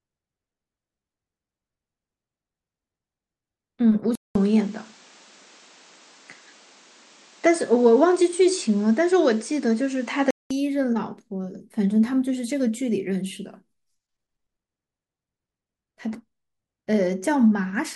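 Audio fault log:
4.15 to 10.51 s, input switched to a poorer device: after a 200 ms silence, the speech turns duller, with nothing left above 9 kHz and faint new background noise well below it, while loudness stays much the same; at 10.51 s the full brightness returns. This is likely the recording input jumping to a lesser microphone or a headset's call mode, whose narrower band and own background noise replace the original device's until it switches back.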